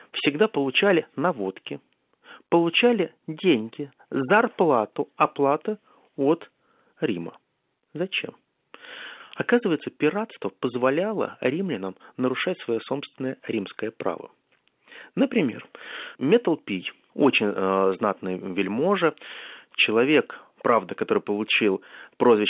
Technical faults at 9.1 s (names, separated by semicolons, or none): none